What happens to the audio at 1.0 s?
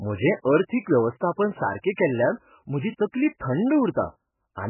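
At 1.0 s the speech passes through what is likely heavily starved MP3 compression, present throughout the clip. The encoder removes everything above 3 kHz and switches weak frequency lines on and off frame by frame, so the sound turns dull, watery and swirly, with smeared attacks.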